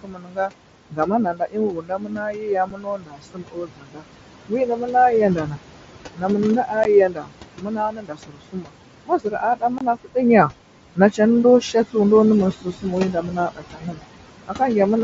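Noise suppressor artifacts run through the whole clip. The suppressor pulls the room noise down by about 21 dB, frame by frame. That noise sits only about 10 dB below the speech. So the remaining background pumps, sinking between phrases and rising under the voice.

From 0.03 to 5.6 s, the noise suppressor cuts speech. It mistakes quieter speech for noise. Soft consonants and word endings sink with the background, by up to about 22 dB. Around four seconds of this stretch sound swallowed or faint.

At 2.70 s there is unconcealed Bluetooth headset packet loss. A 7.5 ms hole opens in the sound, which fits one lost mSBC frame. Nothing fills the gap. Its edges are abrupt.

From 6.16 to 11.96 s the suppressor cuts speech again, by up to about 22 dB. Roughly three seconds in total turn faint or clipped at the edges.

At 6.84 s the headset link drops 15 ms, which points to two lost frames. The sound breaks off abruptly.

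From 9.78 to 9.81 s a 22.5 ms gap follows, which fits three lost frames. It is the longest hole in the clip. It sounds like a brief, hard chop.

From 12.53 to 14.61 s the suppressor cuts speech once more, by up to about 21 dB. About a second of quiet speech fades into the background.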